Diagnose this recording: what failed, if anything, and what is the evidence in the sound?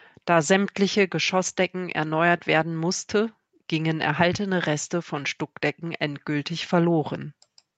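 Nothing failed: the speech has gone through ordinary call microphone processing, whose high-pass filter trims the lowest bass and whose band stops at 8 kHz, and no stage of the chain shows a problem in the sound.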